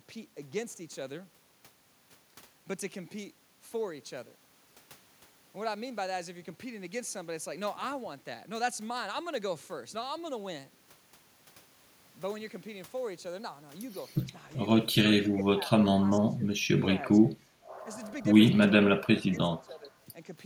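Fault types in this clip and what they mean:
speech suppressed in double talk: the echo canceller likely could not separate overlapping talk from loudspeaker echo and turned everything down, so the speech sinks in four patches from 15.2 to 19.93 s, by about 10 to 25 dB, deepest near 19 s.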